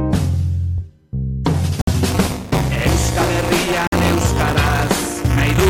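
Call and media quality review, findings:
Gap between stream segments at 1.81–1.88 s (61 ms) and 3.87–3.92 s (53 ms): hard-edged silent holes, clean vertical blank columns on spectrogram, flat-line waveform. Segment timestamps leave small gaps at roughly 2 s boundaries, player pads with silence, nothing lost.

Buffer tearing from 2.08 s to end: continuous 200 Hz robotic buzz, present only with signal. Writer and hardware read pointer slipped; about a tenth of each 5 ms period replays audio roughly 15 ms old. Spectrogram shows 200 Hz comb striping, waveform periodic discontinuities.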